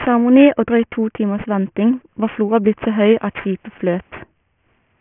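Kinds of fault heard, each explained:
Aliasing: the speech was resampled without an anti-alias filter, which fits a drop to a 6 kHz rate. Content above 3 kHz folds back beneath it as gritty, metallic tones about 20 dB under the speech, unlike a plain low-pass, which only dulls.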